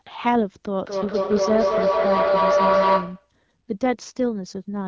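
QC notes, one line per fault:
0.85–3.35 s, feedback howl: a ringing tone near 500 Hz builds from repeats about 200 ms apart and rises about 3 dB above the speech, from a loudspeaker-to-microphone loop gaining level each pass.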